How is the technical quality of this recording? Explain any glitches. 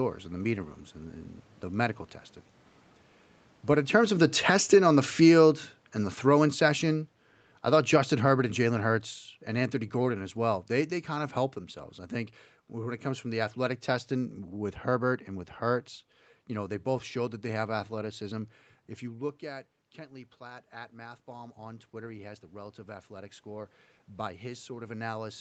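The recording has two level faults, both from the automatic gain control reacting to a talker's change in distance from the microphone, heard against the call path's 8 kHz ceiling.

From 3.7 to 11.64 s, just before "I think when it", the speech and room noise sink together by about 15 dB. This is automatic gain falling. The talker came closer around 3.5 s, and the control judged the input too loud and slowly lowered its gain.

From 18.11 s to the end, after "showed that they have", speech and background swell together. This is automatic gain rising. The talker moved away around 19 s, dropping the input by about 13 dB, and the control gradually raised its gain to compensate.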